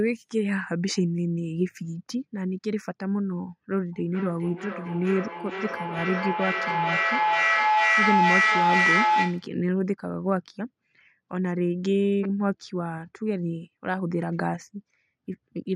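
At 3.93 s a feedback howl starts to build. It lasts until 9.57 s. A microphone is picking up a loudspeaker playing the same call, and each pass around that loop comes back louder. The repeats grow rather than fade. They narrow to a tone near 1 kHz, which rises to about 4 dB above the speech. The howl pulses roughly every 400 ms, matching the loop's round-trip delay. It stops when the loop is broken.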